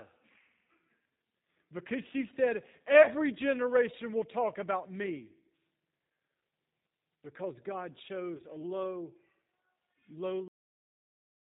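Speech carried through the G.729 codec at 8 kbit/s, with plainly audible codec damage: nothing above 4 kHz, and a rough, synthetic quality from rebuilding the voice out of a vocal tract filter and sparse pulses rather than from simple band-limiting. VoIP packet loss concealed by the speech codec appears at 3.03–3.13 s, where about 40 ms went missing (consistent with two lost packets), and at 8.37–8.42 s, where about 20 ms went missing (consistent with one). The decoder stretched its last pitch and filter into a fading buzzy tone or coloured noise, which distinguishes it from a plain dropout gap. The audio has a cut-off end at 10.48 s, stopping mid-sound with no decay because the final buffers were never played, which distinguishes it from a normal fade or pause.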